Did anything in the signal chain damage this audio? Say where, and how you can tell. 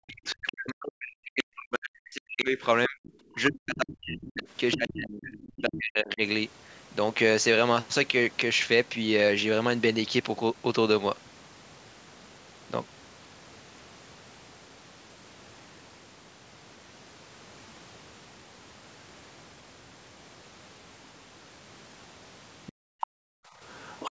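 Yes. The damage is in the call processing stage, at the echo canceller. From 0.05 to 6.22 s the speech is suppressed in double talk. The level keeps sinking and recovering, in places by roughly 40 dB, for about 5 s in total. The sound dips. The likely cause is the canceller hearing both sides at once. It could not tell the talker from the loudspeaker echo, so it turned everything down.

The other side's voice is leaking through in four short scraps: 3.04 to 3.78 s, 5.32 to 5.61 s, 22.67 to 23.07 s, and 23.72 to 24.11 s. The first two sit low, roughly 25 dB under the speech. The later ones are much louder, roughly 10 dB and 15 dB down. A second voice is audible under the talker. This is likely loudspeaker playback reaching the microphone that the canceller failed to fully remove.

The background is gated by the echo canceller near the end. From 22.72 s to the end, the room sound drops out while the loudspeaker plays, by up to about 40 dB. 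The gating adds up to about a second. The ambience vanishes abruptly and returns when the canceller releases. It lines up with the leakage at 22.67 s and 23.72 s. The canceller is clamping the microphone hard whenever far-end audio is present.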